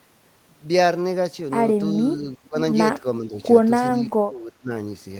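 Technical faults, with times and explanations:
1.95–2.57 s, 3.25–3.35 s, 4.08–4.71 s: speech suppressed in double talk. The speech sinks: a drop of around 15 dB, then a slight 5 dB dip, then about 20 dB. That's likely an echo canceller mistaking it for loudspeaker echo while both sides talked.
2.44–2.48 s: echo leak. A faint scrap of the speech comes back 374 ms late, about 35 dB below the speech. That's likely the far side's echo canceller on a loudspeaker missing some of its mic pickup and sending it back.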